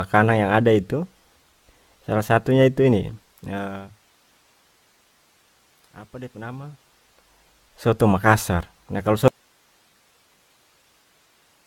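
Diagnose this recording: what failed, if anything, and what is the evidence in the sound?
The codec stage shows generation loss across the whole recording. The top end stops dead at 17 kHz, and the sound is swirly, hollow and smeared, with softened consonant attacks. That degradation is worse than a single encode at a rate that fits AAC-LC at 96 kbit/s would produce. The likely cause is repeated decoding and re-encoding, perhaps around ten passes, each on a shifted frame grid, so quantisation noise and spectral holes accumulate. A single low-bitrate encode would be duller but cleaner, without this stacked swirl.

Zipper noise comes from a gain stage in processing or playback that changes level without smoothing. From 3.05 to 4.35 s the level drops by about 20 dB, and from 6.06 to 7.46 s it climbs back by about 20 dB. Both moves happen in 2 dB steps at roughly ten per second. Each jump puts a small discontinuity into the waveform, so a fast ticking rides on the sound while the level moves. 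A properly interpolated fader would change level just as far but stay silent.

An audio dropout to a faint residue begins abruptly at 9.28 s and lasts to the end. The signal vanishes mid-flow, leaving only hiss about 40 dB below the previous level. That hiss shows that everything after the break kept running, so the likely cause is the source feed being lost upstream. A natural pause or a fade-out would taper or keep some room tone. This one cuts instantly to a steady noise floor.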